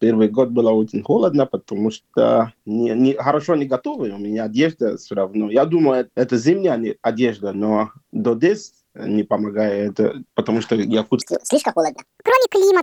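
From 11.22 s to the end at 12.82 s, the sound turns high and hurried: a section at the wrong speed, running 1.6 times fast and about seven semitones sharp, likely from playback against a mismatched clock.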